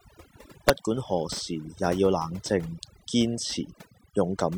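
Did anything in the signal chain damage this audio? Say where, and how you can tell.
Yes. Across the whole clip the gaps between phrases drop to near silence with twinkling specks where there should be steady background noise. That points to overdone noise removal in the processing stage. A noise reduction tool set too hard is cutting individual frequency bands down or off whenever they sit close to its noise estimate, so quieter parts of the voice are stripped away along with the noise.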